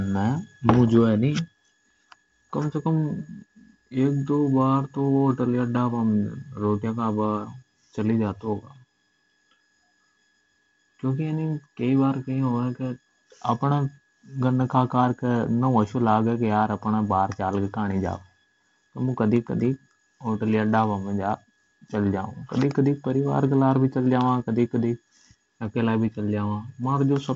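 No technical faults are audible in the speech. It arrives through G.722 wideband telephone coding at 48 kbit/s, with content reaching up to about 7.7 kHz and nothing above, and the coding leaves only a light, steady grain on the sound.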